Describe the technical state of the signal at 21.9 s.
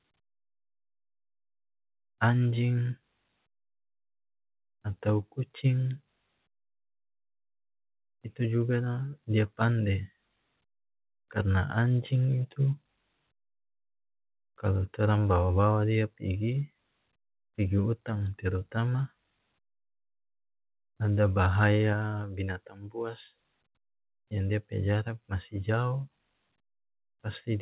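At 21.93 s the microphone volume was most likely stepped down by the call software's automatic gain control, which cut the device's input level in a single move instead of ramping it. The speech and the background noise under it drop together by about 4 dB, so the level falls abruptly just before "binatang buas" and stays lower from there. The G.711 call path keeps everything below 4 kHz, as it does throughout.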